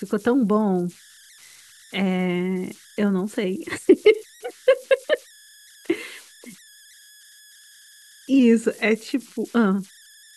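It's a speech clip with a faint tone sitting under it the whole way through, somewhere around 1.5 kHz and about 28 dB below the speech. That's converter idle tones: an undithered delta-sigma converter settles into repeating bit patterns on low-level input, and those patterns come out as a steady tone that's easiest to catch in the pauses. There are also two spots where the sound suddenly detunes. From 3.77 to 4.47 s it runs 5.8% fast and rises by roughly a semitone (about 98 cents). From 8.39 to 9.52 s it runs 5.8% slow and drops by about a semitone (around 103 cents). The likely cause is a drift correction step, where clock-matching software briefly shifts the playback rate to refill or drain its buffer.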